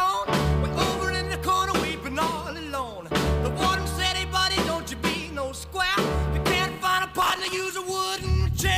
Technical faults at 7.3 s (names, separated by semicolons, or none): processor overload crackle